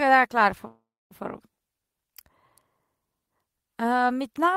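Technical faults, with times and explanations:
0.67 to 1.13 s, call audio freeze: The speech stops moving forward. The last sound is stretched into a fading buzz or hiss, then about 260 ms of silence. Packets were likely held up in transit, leaving the jitter buffer empty, so the receiver padded the gap. About 430 ms of filler was inserted. When the audio returns, it picks up exactly where it stopped. Nothing is lost, but everything after this point arrives about 430 ms later.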